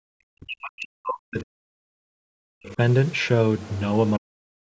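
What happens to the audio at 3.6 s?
At 3.6 s you get a short burst of the other side's voice leaking through, from about 3.59 to 3.81 s. It's a faint second voice sitting roughly 25 dB under the main speech, there for about a fifth of a second and then gone. The likely cause is the far end playing out of the talker's loudspeaker, getting picked up by the mic, and slipping past the echo canceller instead of being fully removed.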